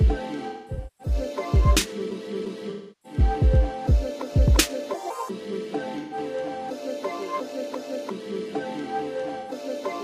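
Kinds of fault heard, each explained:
AAC frame loss with concealment: Compressed AAC frames went missing, and the decoder covered each gap by rebuilding audio from the last good spectrum, using scrambled signs or interpolated energy, so the sound smears into noisy, phasey patches. Dropouts fall at 0.48–1.14 s (about 427 ms lost across 512 ms, the longest run around 200 ms), 2.70–3.19 s (341 ms), 5.98–6.17 s (128 ms) and 9.39–9.51 s (85 ms).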